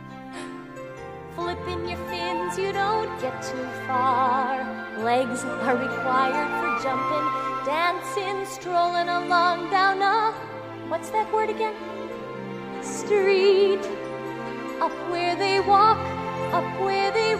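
No technical faults can be heard anywhere in this audio. Nothing in it calls for a timestamp or a repair.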